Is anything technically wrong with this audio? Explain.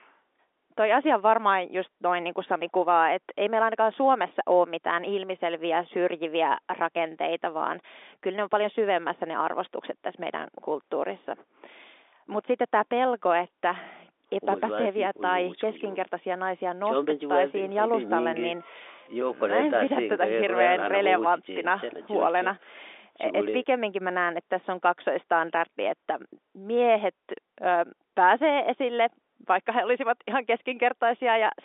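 No, nothing's wrong here; it's just ordinary speech over a G.711 telephone line, so the sound sits in the usual narrow band of roughly 300 Hz to 3.6 kHz and any faint coding hiss that rides along with the level is simply part of how that format works.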